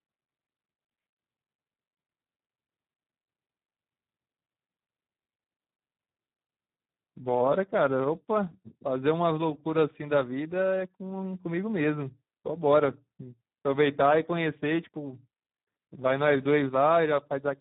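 Speex codec damage runs through the whole of this speech clip, and it is heavy. With so few bits left for the excitation signal, the CELP coder cannot rebuild the voice's fine structure, so the speech comes out hoarse, noisy and edging toward robotic, which fits a narrowband setting around 8 kbps. Nothing is present above 3.8 kHz, leaving the audio boxy and muffled across its full length.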